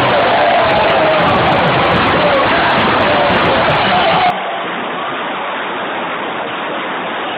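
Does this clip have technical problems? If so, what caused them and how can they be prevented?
Yes. From 4.30 s to the end, the sound abruptly turns dull and boxy, with nothing above 3.8 kHz, a level about 10 dB lower, and a faint new background noise well beneath the signal. There is no gap at the change. The likely cause is the input switched to a poorer device, with a narrower passband and its own noise. On a spectrogram, everything above 3.8 kHz cuts off sharply at 4.30 s. On the waveform, the amplitude steps down at the same point. To prevent this, lock the recording input to one named device and turn off automatic device switching and headset call profiles before recording.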